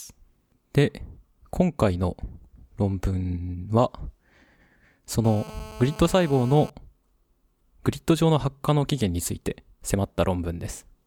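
From 5.25 to 6.70 s there's a GSM phone buzz under the speech, a hard, raspy 217 Hz drone packed with harmonics, sitting about 19 dB down. A nearby 2G phone on a call is bursting, and the audio circuitry rectifies those pulses, so it holds steady throughout.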